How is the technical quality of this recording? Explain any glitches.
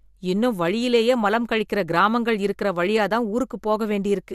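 No technical faults are audible in this recording.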